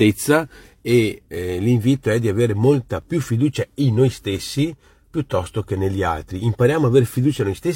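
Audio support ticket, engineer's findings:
Small skip at 3.02–3.06 s; about 40 ms of speech dropped. Overlap between stream segments: overlapping timestamps cause the player to trim real audio, producing a waveform jump.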